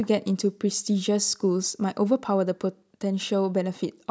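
The speech carries no technical faults; it has passed through a call's microphone processing, whose high-pass filter trims the lowest bass and whose content stops at 8 kHz, as expected for that path.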